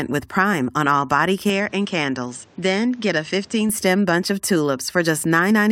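Input switched to a poorer device from 1.50 to 3.69 s, after "on all body" and until "bunch of": with no gap, the band stops at 8.6 kHz, level falls about 5 dB and new noise sits about 30 dB down, likely from recording switching to another microphone.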